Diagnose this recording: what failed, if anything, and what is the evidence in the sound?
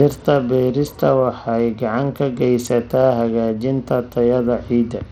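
Codec stage, across the whole clip: the treble keeps dropping out and flickering, with a gritty grain and some aliasing riding on the speech. That's likely Bluetooth SBC compression running short of bits, with the damage pointing to a link of around 80 kbps.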